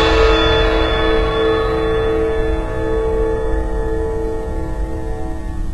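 From start to finish the music's treble sounds synthetic: cymbals and bright edges come across gritty and metallic, with an upper range that stays airy but doesn't track the instruments below it. The likely cause is HE-AAC compression, with heavy damage that fits a bitrate around 16 kbps, where the treble is rebuilt by copying lower bands upward. A spectrogram would show repeated, blocky upper bands with misaligned harmonics and nothing above 11.8 kHz.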